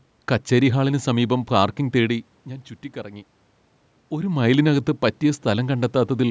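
Speech, with no technical fault to point to.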